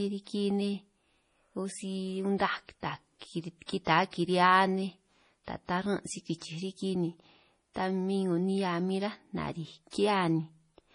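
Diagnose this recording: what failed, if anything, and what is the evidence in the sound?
The failure is at the codec stage. The speech has a hard ceiling near 10.5 kHz, with nothing above it, and heavy coding damage throughout: a watery, swirling texture and metallic chirps on sibilants. On a spectrogram the top edge is a flat horizontal cutoff, and the upper band breaks into isolated blobs that flicker on and off between frames. The likely cause is MP3 compression, and the damage points to a low bitrate around 32 kbps.

Pre-echo, also at the codec stage, appears three times, at 3.66–3.69 s, 3.85–3.87 s and 9.91–9.93 s, the last just after "ráj nariij". Each is a short hiss of 22 to 26 ms ahead of a sharp onset, and the attack itself sounds softened. The codec spreads its quantisation noise across a whole transform block, so noise sized for the loud attack also fills the quiet moment before it. 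On a waveform, low-level fuzz rises before each transient. On a spectrogram, broadband smear precedes the onset.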